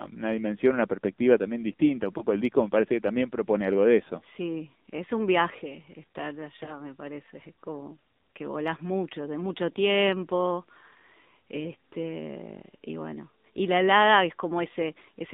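This Spanish speech clip has passed through the AMR narrowband mobile codec. The sound is buzzy and synthetic, which fits the 7.4 kbps mode, and the band runs only from 200 Hz to 3.7 kHz. A spectrogram would show a hard ceiling just below 4 kHz with nothing above it. Lost AMR speech frames occur at 2.18–2.24 s, just before "el disco me parece", and at 6.64–6.71 s, between "es un viaje estar" and "me parece". In each case the decoder repeats its last pitch and vocal tract settings at reduced gain, and each gap points to a single lost 20 ms frame. On a waveform each appears as a short disturbance, and on a spectrogram as a brief smeared patch before normal speech resumes.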